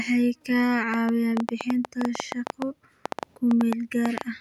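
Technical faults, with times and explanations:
0.94–4.22 s, train of clicks: a run of roughly thirty sharp, similar-shaped ticks at about 7.6 per second, unevenly spaced and standing out well above the speech, with peaks about 15 dB over it. They sit on top of the sound and carry on through pauses. This is likely interference from nearby equipment or a faulty connection or power supply. Unlike a dropout, nothing is missing. Unlike crackle, the clicks are sparse, alike and sustained as one train.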